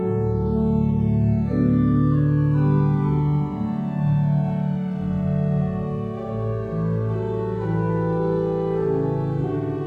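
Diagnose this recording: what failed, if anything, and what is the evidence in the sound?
The failure is at the converter stage: the two channels were captured on devices with separate, unsynchronised clocks, so the channels drift apart. A clock mismatch of a few hundred parts per million lets the inter-channel delay slide steadily, reaching a few milliseconds by the end. Heard in mono, the summed channels form a comb filter whose notches sweep slowly through the spectrum across the whole clip, producing a gradual, hollow flanging on all the sound.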